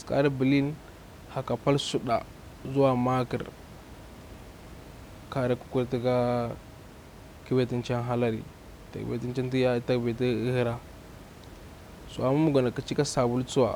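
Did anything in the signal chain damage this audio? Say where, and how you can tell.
No, nothing in the signal chain damaged this audio, and the room noise about 20 dB below the speech belongs to the recording space rather than to any stage of the chain.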